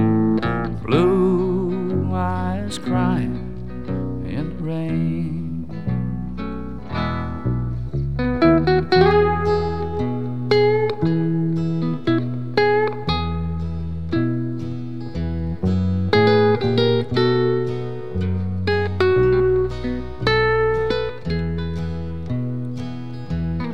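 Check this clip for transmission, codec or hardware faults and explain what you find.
Nothing here points to a problem with how the audio was sent, encoded or captured, so there's nothing to flag.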